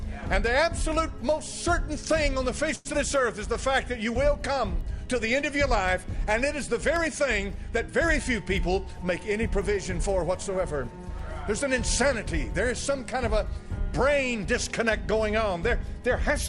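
A short stall from a late packet at 2.75 to 2.87 s: the jitter buffer ran dry, so the last sound is held about 96 ms, with nothing lost. A short concealed packet loss follows at 2.93 to 2.95 s: 40 ms of audio never arrived, and only a 3 ms bridge covers the gap. A jitter buffer speed-up runs from 9.52 to 11.10 s, trimming roughly 40 ms in small pitch-period cuts, so the audio plays at 102% speed without any change in pitch.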